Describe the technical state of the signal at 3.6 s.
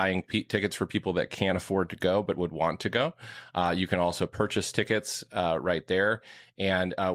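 At 3.59 to 3.61 s, after "would want to go", a lost packet was rebuilt from error correction. A low-bitrate copy fills the 20 ms, so there's no gap, just brief rough noise.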